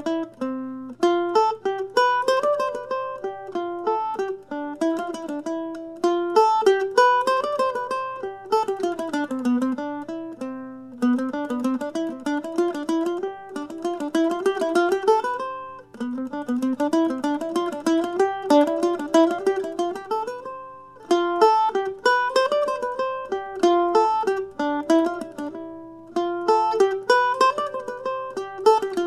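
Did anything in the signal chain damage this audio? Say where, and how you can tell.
No, nothing in the signal chain stood out as damaging this audio when I listened.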